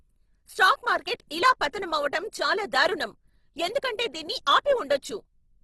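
Throughout, the speech has plainly audible Opus compression, likely at a low bitrate near 16 kbps in CELT mode. Nothing remains above 12.2 kHz, and starved bands are noise-filled, so the sound turns grainy and rough rather than taking on MP3's swirling, hollowed texture.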